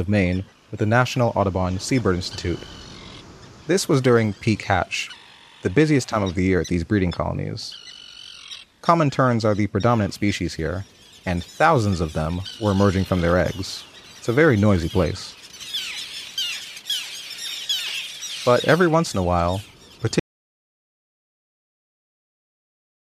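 At 20.2 s the sound cuts off abruptly in an audio dropout to silence lasting to the end. The input was likely lost while recording continued writing silence, so no room tone remains. The waveform becomes a flat line and the spectrogram turns blank.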